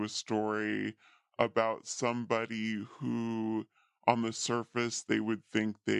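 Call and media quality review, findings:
Speech low and dragging, wrong sample rate, whole clip. Pitch down about 5.5 semitones, tempo 0.73x, both shifted by the same ratio. Probable component: playback/resampling stage. Samples clocked out without conversion; the ratio fits 44.1 kHz audio played at 32 kHz.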